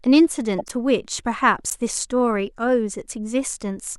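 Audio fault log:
0.58–0.71 s, corrupt frame decoded: a short glitch breaks into the speech. Damaged bits in a run of several compressed frames were decoded anyway. Misread gains and codes put energy at the wrong frequencies, peaking around -15 dBFS.
1.70–1.76 s, corrupt frame decoded: a shorter, louder glitch, near -10 dBFS. A few frames were hit. Each lasts only a frame's length, so the sound is brief.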